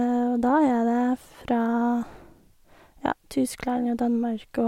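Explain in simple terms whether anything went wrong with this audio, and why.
Nothing went wrong here.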